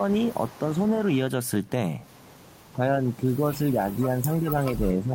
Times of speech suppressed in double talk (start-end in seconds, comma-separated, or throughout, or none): 2.73-5.15